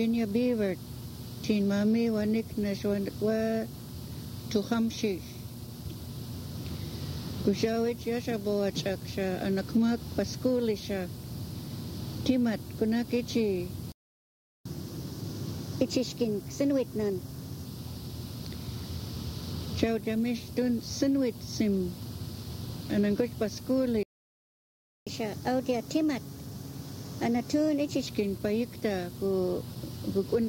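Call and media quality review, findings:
Playback stall, 13.92–14.66 s (0.73 s) and 24.03–25.07 s (1.03 s): sound cuts off mid-flow, then resumes. Flat zero line on waveform, blank vertical band on spectrogram. Likely player buffer underrun or blocked audio thread.

Catch-up at higher speed, 14.66–17.66 s at 1.1x (pitch up about one and a half semitones) and 25.07–28.07 s at 1.15x (up about two semitones): player resamples its backlog to recover lost time. Spectrogram harmonics shift upward, then drop back; waveform cycles compressed.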